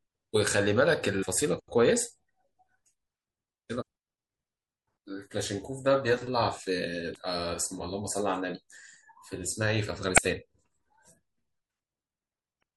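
The speech has a watery, swirling quality from start to finish, with smeared attacks and dull treble. That is likely MP3 compression at a low bitrate, around 64 kbps. Starved of bits, the encoder cuts the top end and drops weak frequency lines frame by frame.

Damaged data in a compressed stream breaks in five times: brief blips at 1.21 s and 3.81 s, then longer breaks at 7.12 to 7.17 s, 10.14 to 10.19 s and 12.59 to 12.64 s. Corrupt frames make the decoder lose sync and skip ahead.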